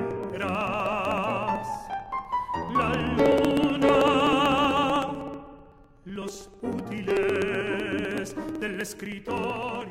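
From 0.11 s to 9.82 s a steady run of ticks sounds every 0.063 s, about 16 per second. These are periodic USB or driver dropouts: something stalls the audio path at a fixed interval, and about a millisecond of sound is skipped each time.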